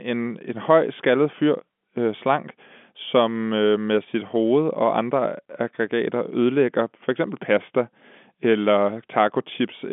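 Nothing here needs fixing: it's a speech recording carried over an ordinary phone line, and the sound topping out around 3.7 kHz is simply what G.711 telephone coding does, which fits a 64 kbps mu-law connection.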